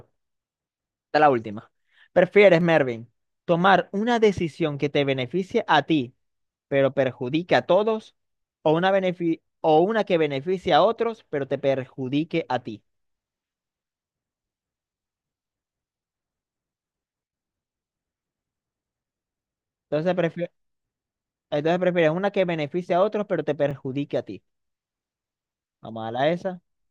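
Repeated buffer at 2.61, 10.51, 19.13 and 23.71 s: new audio arrives late, so the last 5.3 ms block, fitting a 256-sample buffer, replays once or twice, giving brief clicks.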